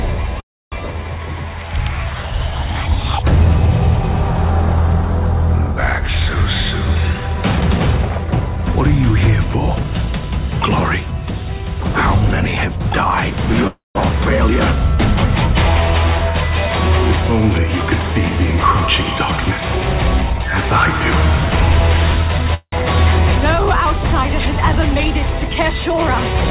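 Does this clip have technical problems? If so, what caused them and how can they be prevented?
Yes. At 0.40–0.74, 13.67–13.97 and 22.54–22.74 s the last sound drags on as a fading buzz, then silence, before resuming. This is likely a call audio freeze: delayed packets drained the jitter buffer. Prevent it with a steadier, less congested network path.

At 6.50–8.73, 9.18–9.85 and 18.12–20.62 s the audio runs hurried at unchanged pitch, at 111%, 105% and 112% speed. This is jitter buffer speed-up: the receiver trimmed tiny pitch-period slices to shed excess buffered delay. Prevent it by reducing jitter so packets don't arrive in bursts.

The G.711 A-law call path leaves nothing above 4 kHz.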